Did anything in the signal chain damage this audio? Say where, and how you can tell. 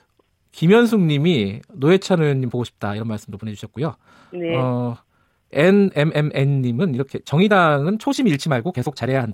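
Yes. A time-stretched section runs from 2.40 s to the end: the pace jumps abruptly to about 1.38 times normal while pitch stays put, sounding rushed. This is likely software time-compression at the processing stage, dropping short segments to shorten the audio.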